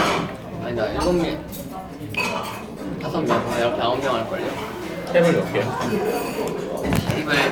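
No technical faults are audible anywhere in this audio.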